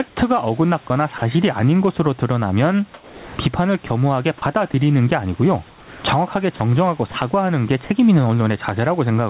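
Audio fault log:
Throughout: gain pumping. The input gain appears set far too high, and a fast limiter likely clamps it on each loud syllable, so the level swings by around 20 dB. Between phrases the room noise swells up, then ducks sharply as speech returns, and loud and soft passages sit squashed close together. On a waveform the peaks look held to a near-constant level, with the noise floor visibly rising in every gap. On a spectrogram the background band brightens and dims in step with the speech.
0.08–0.16 s and 5.68–6.04 s: comfort noise in place of the background. In these pauses the real room background, about 31 dB and about 22 dB below the loud parts, gives way to steady, featureless synthetic noise for 80 ms and 360 ms. The likely cause is that the sender stopped transmitting during silence and the receiver filled the gap. The fill is about 2 dB and about 4 dB quieter. A spectrogram shows a smooth, uniform smear replacing textured noise, and a waveform shows a slightly lower, even band.
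0.88–1.22 s and 2.94–4.74 s: sound chopped by the voice detector. Across these stretches the sender's voice detector likely flipped on and off several times, cutting out about 60 ms and about 520 ms of material in total. Quiet syllable edges vanish into comfort noise, so the speech sounds broken. A waveform shows the speech envelope interrupted by short flat-topped noise patches, and a spectrogram shows harmonics stopping abruptly and then resuming.
7.12–7.14 s and 7.84–7.90 s: sound dropped by the voice detector. Here quiet speech was likely mistaken for background, so 20 ms and then 40 ms of it were lost and replaced with steady noise lasting 20 ms and 60 ms before transmission resumed. Each event is heard as a tiny gap or clipped word ending. On a spectrogram the harmonic lines break off into a plain noise patch, and a waveform shows a brief dip to a low, even level. The narrowband call path, with nothing above 4 kHz, fits G.711 coding.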